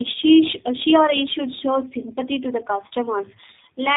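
Throughout the speech, tandem speech coding is audible. Two low-rate speech codecs in a row, consistent with AMR-NB then G.729A, each re-modelled already degraded sound. The result is rough, muffled and warbly, and a spectrogram shows nothing above 3.8 kHz, with smeared, blotchy formants.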